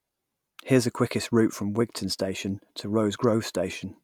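Nothing here calls for comment, since the speech comes through without any audible fault at any point in the recording.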